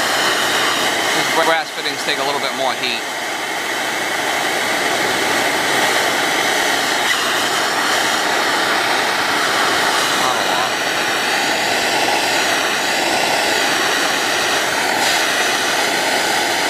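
Overlapping chunks occur at 1.43, 4.03, 6.63, 9.23, 11.83 and 14.43 s. Each 2.5 s chunk begins 100 ms before the previous one ended, so that slice of sound plays twice at every join. The result is a stutter every 2.6 s.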